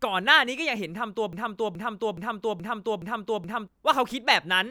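A broken-record loop runs from 1.33 s to 3.68 s in this speech clip. A fragment of about 0.42 s repeats exactly, back to back, six times, so the same sliver of sound stutters on for over two seconds. The likely cause is a stall in the player, encoder or stream, which kept re-sending the last buffered piece instead of new audio. Whatever should have been heard in that stretch is lost.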